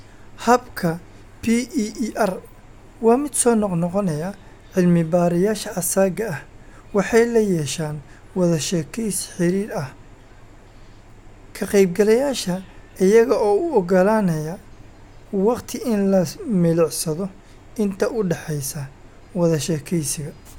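Speech with no audible faults.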